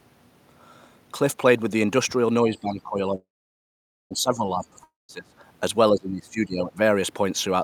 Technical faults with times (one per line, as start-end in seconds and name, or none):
2.43-5.35 speech suppressed in double talk
3.15-4.13 call audio freeze
4.84-5.11 long network dropout
5.90-6.78 speech suppressed in double talk